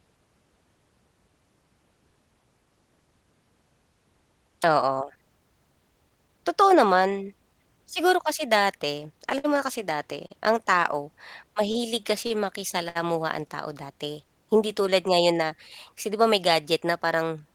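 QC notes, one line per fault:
9.38–9.46 s, 10.27–10.32 s, 11.72–11.77 s, 12.27–12.32 s, 12.89–12.97 s: short stalls from late packets. Each time the jitter buffer ran dry, so the receiver held the last sound for 58, 32, 27, 34 and 65 ms, then resumed where it left off. Nothing is lost, but each sound drags briefly with a faint buzz or dip.
15.13–15.43 s: jitter buffer speed-up. The buffer was over its target delay, so the receiver cut pitch-period-sized slices, around 40 ms in total, and played at 110% speed. Pitch stays put while the speech sounds briefly rushed.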